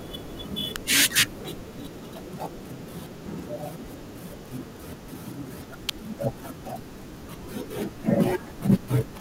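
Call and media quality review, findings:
Sharp snaps at 0.76 s and 5.89 s over the speech, each peaking roughly -5 dBFS. Reads as an electrical switching spike: likely a nearby switch, relay or motor arcing and the mic or line cable picking up the burst. Short, clean transient sitting on top of the audio. Worth checking grounding and cable routing near any switched loads.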